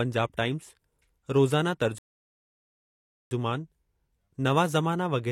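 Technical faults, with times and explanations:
1.98 to 3.31 s, rebuffering stall: the speech drops to dead silence for about 1.33 s, then picks up exactly where it left off. The player ran dry of downloaded audio and waited for more, so nothing's missing, the clip just gets longer.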